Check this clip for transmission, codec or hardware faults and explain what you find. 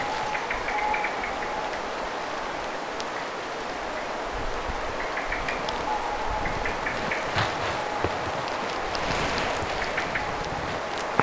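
No faults detected.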